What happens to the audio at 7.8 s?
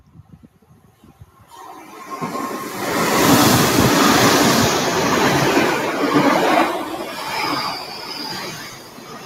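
From 7.76 s to the end at 9.26 s, the sound is cut by the noise suppressor. A speech-tuned suppressor judged this sound to be noise and pulled it down by as much as about 12 dB. Sudden onsets mostly come through, which separates this from a deliberate fade-out that would lower everything evenly.

This happens on top of the noise suppressor applied to music or sounds throughout the clip, whose gain rides up and down by roughly 20 dB. Sustained tones and tails keep sinking and then recovering, so the audio pumps and thins. A compressor reacts to loudness, whereas this follows how steady the sound is.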